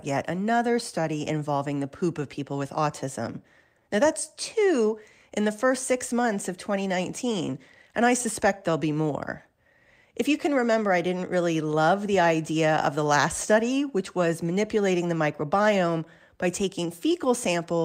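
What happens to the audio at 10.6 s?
At 10.6 s the speech is subject to small timing edits, heard at most as slight hiccups or an unsteady tempo. This comes from clock drift between sender and receiver: the sender's clock runs about 3% slow, so the receiver's jitter buffer keeps draining and must be topped up to avoid running empty.

Those top-ups are repeated timing corrections spanning 0.58 to 17.13 s. The receiver repeatedly duplicates short pieces at uneven intervals, all stretching the audio, so playback runs at 97% speed and adds roughly 400 ms over the stretch.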